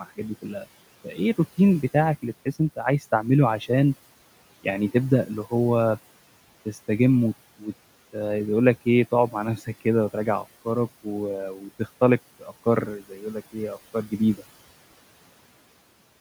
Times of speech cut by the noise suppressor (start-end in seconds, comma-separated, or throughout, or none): 1.04-1.39, 9.32-9.82, 11.55-11.87, 12.39-13.55, 13.94-14.42